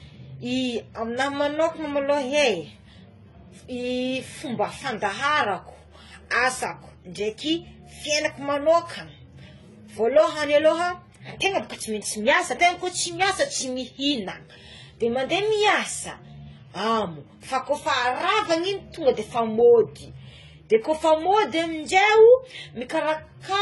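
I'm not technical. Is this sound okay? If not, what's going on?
No. Throughout the clip, the speech has nothing above about 11.5 kHz, so the crisp top is missing. This is most likely transcoding between lossy codecs: the recording was squeezed into one compressed format, then re-squeezed into another. Each step throws away detail and adds its own blur, and the two kinds of damage pile up and are heard together.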